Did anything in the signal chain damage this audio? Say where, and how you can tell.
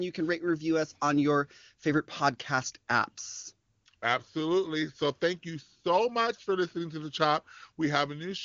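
No, nothing in the signal chain damaged this audio.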